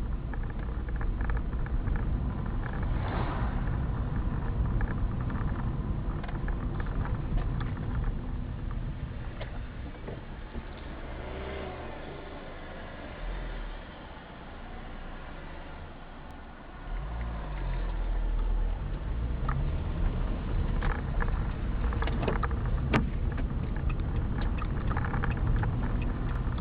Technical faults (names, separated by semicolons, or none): overlapping chunks